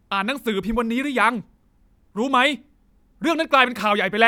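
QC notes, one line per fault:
No faults heard in this clip.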